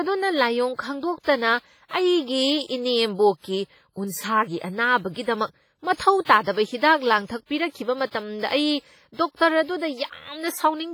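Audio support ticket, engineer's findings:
Speech, whole clip: ringing, washy smearing around onsets and decays. A hiss swells and recedes with the signal, and weak components have dropped out. Likely WMA compression with heavy damage, consistent with WMA 1 at a low bitrate near 24 kbps. Long transform blocks spread quantisation noise over tens of milliseconds around each sound, and weak spectral lines are zeroed.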